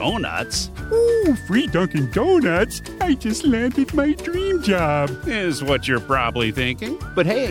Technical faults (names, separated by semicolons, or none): compressed frames skipped